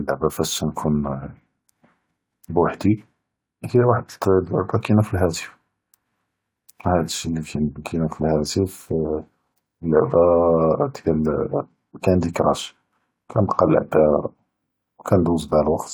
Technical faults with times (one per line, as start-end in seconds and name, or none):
none